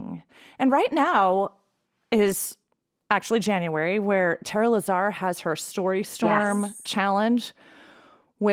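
Nothing goes wrong anywhere in this speech, and the Opus voice compression sits comfortably in its hybrid mode with the full band intact, leaving only the light coding traces you'd expect from a rate around 24 kbps.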